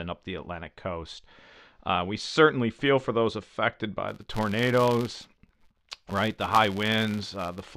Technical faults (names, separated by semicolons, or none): filter restarted on every block